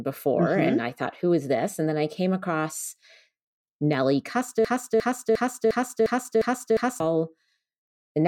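At 4.65 s the speech locks into a broken-record loop until 7.00 s. A fragment of about 0.35 s repeats exactly, seven times, back to back. The likely cause is a stalled player or stream resending its last fragment. Whatever followed is lost.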